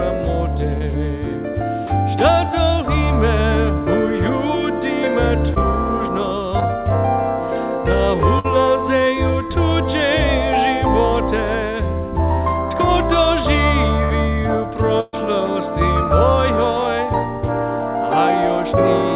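Brief smears or wobbles at 0.78, 5.54 and 6.60 s are short concealed packet loss: each time about 20 ms of audio arrived too late, and the receiver bridged the hole by extending the preceding sound before blending back in.

At 8.39 to 8.46 s, 14.04 to 14.12 s and 15.00 to 15.15 s the sound stretches into a held buzz or fading hiss, then resumes with material missing. This is a burst of packet loss: 60, 60 and 120 ms went missing, and the receiver filled each gap by continuing and fading the last sound. Throughout, nothing reaches above 4 kHz, which points to a narrowband telephone codec on the call path.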